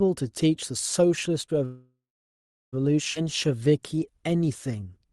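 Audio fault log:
1.65–2.75 s, call audio freeze: The sound stops and the last moment carries on as a fading buzz or hiss, then about 0.73 s of silence. Packets were likely held up and the jitter buffer ran dry. Nothing is lost. About 1.07 s of delay is inserted.
3.15–3.17 s, skip ahead: Playback jumps forward with only a tiny join. Roughly 0.7 s of speech is gone. The two sides meet almost directly. This cuts back much of the delay built up by the earlier freeze.
3.24–5.10 s, jitter buffer slow-down: The speech runs at about 92% speed with the pitch unchanged. It sounds drawn out. The buffer repeated single pitch periods and bits of pauses to rebuild its reserve, adding 163 ms.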